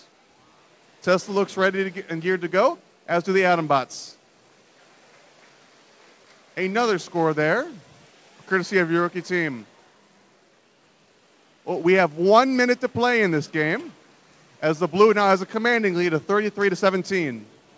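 No technical faults can be heard: the audio came through a wideband call path with nothing above 8 kHz, which fits G.722 coding at 64 kbps, and that path is working as it should.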